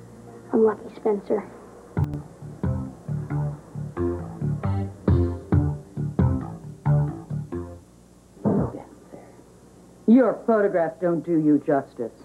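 At 2.04 to 2.14 s the audio and its background noise abruptly drop by about 8 dB together, a sudden gain jump, likely from a digital gain change applied without a ramp.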